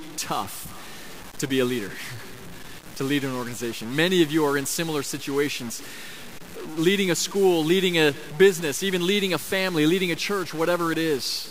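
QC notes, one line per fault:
Throughout: stuck bit, likely. The speech carries a harsh, buzzy grit, and the pauses fill with noise instead of going quiet. One data bit pinned high or low pushes about half the samples off by a step of about -35 dBFS, following the waveform.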